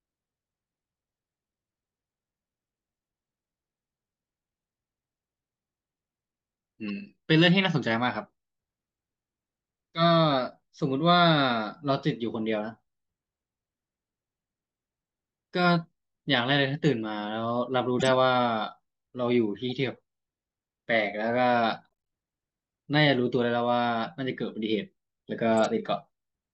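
At 6.88–6.90 s, 17.99–18.13 s, 19.70–19.72 s and 25.61–25.65 s, the speech carries corrupt frame decoded faults. Damaged compressed frames were played as if valid, so misread gains and codes put energy at wrong frequencies. Each event is a short chirp or noise blip. The first is a faint single-frame tick near -30 dBFS. The 18 s event spans several frames and is loudest, about -15 dBFS. The last two sit around -25 dBFS.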